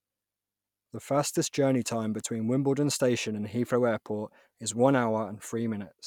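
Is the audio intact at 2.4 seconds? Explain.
Yes, the speech at 2.4 seconds plays through cleanly, with no audible dropout, click, distortion or other fault at that moment.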